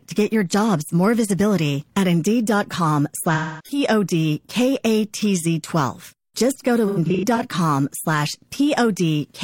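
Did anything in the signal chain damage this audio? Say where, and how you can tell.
Yes. At 3.34 to 3.78 s the sound smears into a phasey, noisy patch, and from 6.88 to 7.40 s it breaks into short blurred gaps of up to around a tenth of a second. This is AAC frame loss with concealment at the codec stage, with the decoder patching missing frames from the last good spectrum.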